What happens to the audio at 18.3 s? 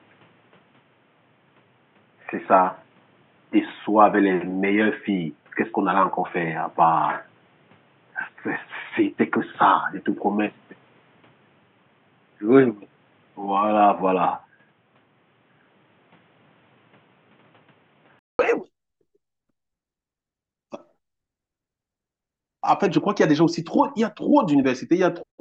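Right around 18.39 s the speech drops out for about 200 ms and then returns noticeably brighter and fuller, with a level shift of about 5 dB. From the start up to that gap, nothing above 3.8 kHz comes through, so the speech sounds dull and boxy over faint background noise. The likely cause is an input switched to a poorer device, such as a headset's narrowband call profile, for that first stretch before the input switched back.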